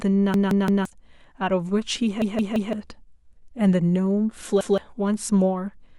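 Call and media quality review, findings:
Repeated buffer, 0.34–0.85 s: one 171 ms segment heard four times, hard join at each repeat, stutter. Roughly half a second of speech missing. The playback device replayed its last buffer when new audio arrived late. Segment length fits an 8192-sample buffer.

Repeated buffer, 2.22–2.73 s: same pattern, four plays of the 171 ms segment, about half a second lost.

Repeated buffer, 4.61–4.78 s: one extra play, shorter stutter, roughly 150 ms lost.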